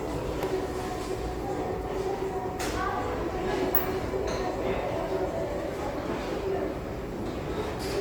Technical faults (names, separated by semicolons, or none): Opus compression